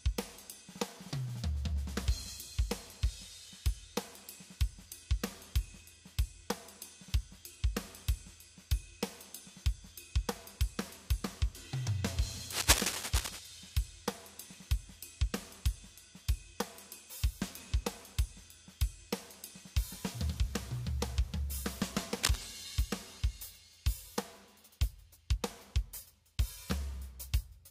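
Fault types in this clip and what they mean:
Cable scratch noise: ragged scratching bursts roughly as loud as the sound, at 12.5–13.4 s and 22.23–22.48 s, likely from a worn cable or connector being jostled.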